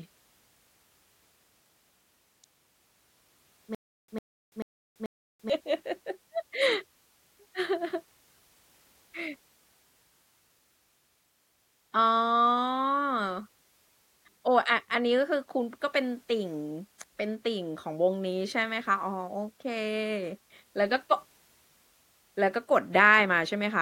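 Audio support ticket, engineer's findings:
Stream likely stalled, replaying its last fragment on each retry. Stutter with silent gaps, 3.75–5.50 s: a 101 ms burst repeats four times, with 336 ms of digital silence between; the audio for that stretch is lost.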